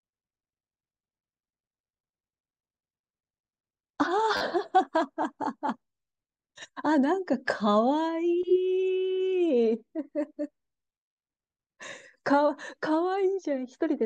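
At 4.37 s the speech catches on a repeated buffer. The device ran short of fresh audio and replayed its last block. A segment of about 10 ms, which fits a 10 ms buffer, sounds again roughly four more times, ending at 4.41 s. Each repeat meets the next with a hard join. Because the piece is so short, the 40 ms stretch comes across as a brief buzz rather than a clear stutter. No speech appears to be skipped afterward.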